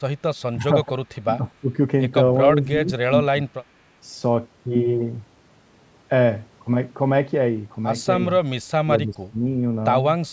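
Speech with speech suppressed in double talk: dips of roughly 15 to 25 dB at 0.53–0.64, 0.83–1.39, 1.61–1.78, 2.52–3.12, 3.31–3.69 and 8.84–9.39 s, likely from an echo canceller ducking the talker during overlap. These are partial fades, not the clean silent gaps of packet loss.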